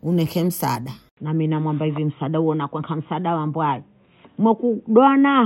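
At 1.09 s, just after "hunieke msaada", the speech drops out for about 80 ms and then resumes sounding dull and boxy through to the end. Everything above 3.8 kHz is gone, a new, faint background noise sits roughly 50 dB below the speech, and the level stays about the same. This is likely an input switched to a poorer device, such as a second microphone or a headset's call profile, with its narrower band and its own noise.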